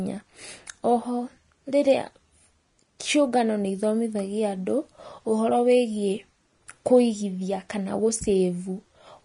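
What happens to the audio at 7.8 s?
At 7.8 s, as throughout, the speech likely went through low-bitrate Vorbis compression, around 32 kbps, which removes everything above 10.6 kHz and turns the coarsely quantised treble into grainy hiss.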